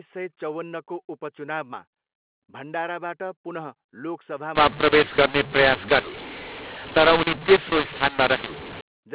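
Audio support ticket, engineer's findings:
Harsh, gritty distortion from 4.55 s to 8.81 s; levels scrambled, pauses filled with hiss. Component: G.711 decoder. mu-law and A-law mixed up: mu-law samples read with A-law, mis-mapping every code so quiet samples rise far above silence. Before 4.55 s the mu-law telephone path sounds as expected, band-limited below 4 kHz.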